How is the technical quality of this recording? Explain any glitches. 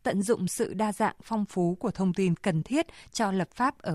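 There's one noticeable glitch. Right after "sự đa dạng phong", from 1.51 to 2.44 s, the speech slows by about 6.3% and drops about 113 cents, roughly a semitone, then snaps back. That's likely a drift correction step, where clock-matching software briefly shifted playback rate to rebalance its buffer.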